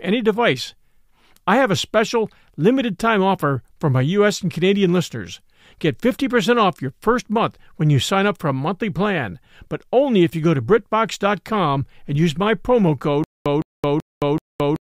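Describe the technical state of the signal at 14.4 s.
At 14.4 s the signal sits inside a stutter with silent gaps running from 13.24 s to the end. A 163 ms fragment repeats every 381 ms, separated by 218 ms of flat digital silence. This is likely a stalled stream replaying its last buffer, and it shows as identical blocks with empty columns between them.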